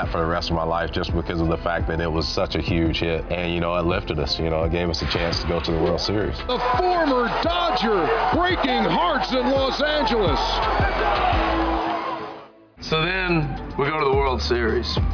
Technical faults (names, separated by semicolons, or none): none